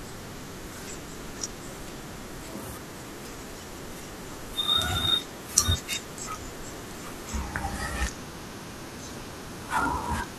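From 7.42 s to the end at 10.38 s, a section at the wrong speed plays back at 0.867 times its recorded rate, likely from being fitted to the wrong clock. Speed and pitch drop together, so the speech turns slower and deeper, roughly three semitones down.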